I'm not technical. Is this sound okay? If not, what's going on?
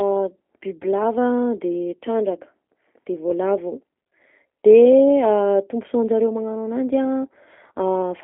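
No. From start to finish the speech sounds thin, muffled and slightly buzzy, like a cheap phone call, with a plainly audible robotic roughness on every word. This is the G.729 codec, a phone-call compression method that doesn't store the sound itself. It keeps a rough description of the voice and rebuilds it at the other end. The line also drops everything below about 250 Hz and above about 3.5 kHz, so the speech loses its depth and its crisp edges.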